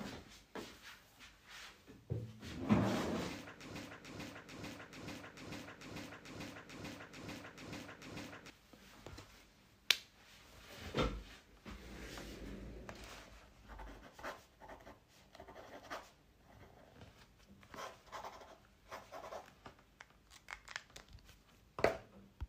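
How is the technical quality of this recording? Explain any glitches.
The recording has one clear fault. From 3.76 to 8.5 s, a broken-record loop repeats a 441 ms fragment 11 times. A stalled player or stream likely resent its last buffer, so the original audio is lost.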